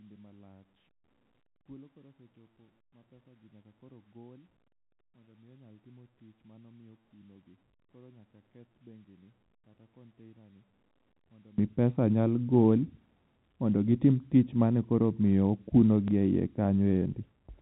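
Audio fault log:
0.00–11.58 s, one channel inverted: summed to mono, the speech falls by about 30 dB to a faint residue until just before "mi pesa nyal gol". The likely cause is reversed polarity on one stereo channel cancelling the shared content. Unlike a plain level drop, only the channel difference remains.
16.08–16.11 s, packet loss with last packet repeated: a 30 ms gap, consistent with one lost packet, is filled by replaying the preceding audio, giving a small blip just before "e yie". Unlike a dropout, there is no silence, only a repeat.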